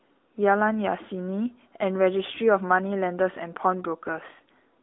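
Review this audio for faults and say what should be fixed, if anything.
The AMR narrowband mobile codec affects the whole clip. Nothing passes above 3.8 kHz, and the line band sits near 250 Hz to 3.6 kHz. The vocal-tract model leaves plainly audible buzzy, synthetic damage, which fits a mid-rate mode near 10 kbps. Route the speech through a wideband path, or at least a higher AMR mode.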